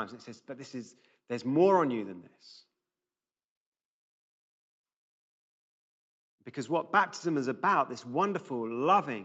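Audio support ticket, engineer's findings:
Findings: no faults in the speech; the call microphone processing and the Opus call path behave as expected, with content limited to 8 kHz.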